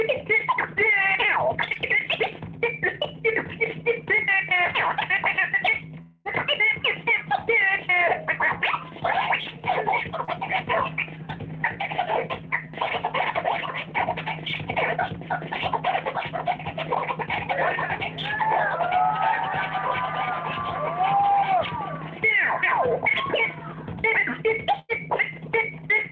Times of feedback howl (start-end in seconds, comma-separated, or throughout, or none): none